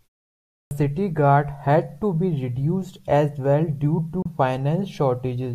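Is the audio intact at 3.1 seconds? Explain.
Yes, the speech at 3.1 s is intact, with no fault at that moment.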